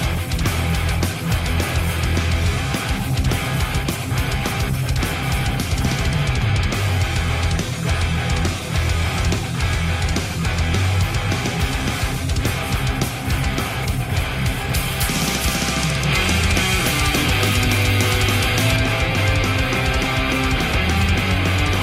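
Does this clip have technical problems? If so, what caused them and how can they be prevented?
Yes. Pre-emphasis left on from 14.74 to 18.76 s: treble boosted before storage was never cut back on playback, so highs sit about 8 dB above 1 kHz at 10 kHz, consistent with the CD 50/15 µs curve, making the sound thin, bright and sibilant. To prevent it, read the emphasis flag and apply the matching de-emphasis filter during decoding.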